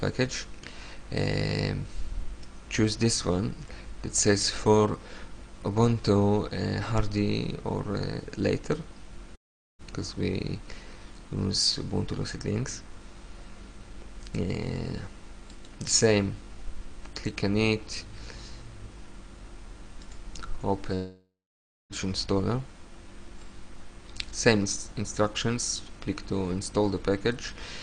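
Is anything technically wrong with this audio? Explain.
Yes, there are two gaps, most likely long network dropouts. At 9.35 s the audio stops for about half a second, to 9.82 s, and at 20.95 s it stops again for roughly a second, to 21.93 s. Each time the last sound is smeared into a fading buzz that dies to silence within a few tenths of a second, the receiver's attempt to cover a stretch that never arrived. The sound then picks up further on, with that section simply gone.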